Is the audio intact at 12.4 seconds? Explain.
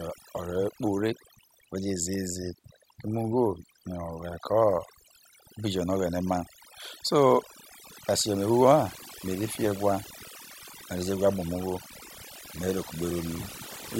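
No. A noise reduction stage set far too aggressively runs through the whole clip, including 12.4 s. This overdone noise removal shuts off frequency bands it mistakes for noise, so the background drops and breaks up into twinkling specks.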